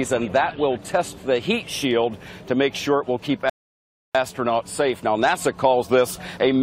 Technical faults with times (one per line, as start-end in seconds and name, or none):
3.50-4.15 rebuffering stall